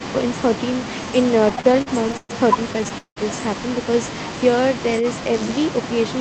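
Speech, carried over a call path that tops out around 8 kHz. From 1.49 to 2.31 s there are repeated stalls (stutter). Packets arrived late, so the jitter buffer kept running dry. The receiver stretched the last sound through each gap. About a third of the span is filled this way, with the longest hold at 122 ms. Nothing is lost, but the speech drags. A second burst runs from 2.73 to 3.18 s. The holds are longer here, up to 185 ms, and cover about half the span. From 3.91 to 4.62 s a jitter buffer slow-down follows. The buffer was rebuilding its reserve by repeating single pitch periods. That adds 50 ms and plays the speech at 94% speed. The pitch stays the same, so sounds are simply drawn out. From 5.34 s to the end there is computer activity noise. It is a buzz near 100 Hz, roughly 25 dB below the speech. Processor or graphics load is shifting the shared ground of the audio circuit, so the buzz follows the computer, not the talker.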